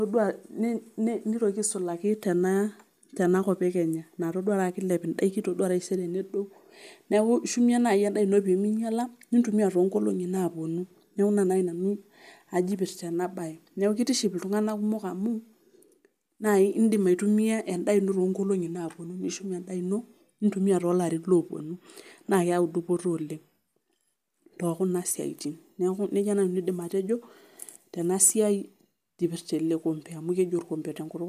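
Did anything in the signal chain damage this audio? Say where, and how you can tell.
No, nothing in the signal chain damaged this audio.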